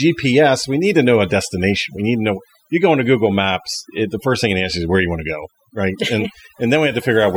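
From the first moment to the last, this speech has overdone noise removal. A denoiser was pushed too hard, so any frequency band sitting close to its idea of the noise floor gets pulled way down or shut off entirely, and the softer parts of the voice get caught in that too. You hear it as a background that has dropped away and broken up into little twinkly, warbling specks.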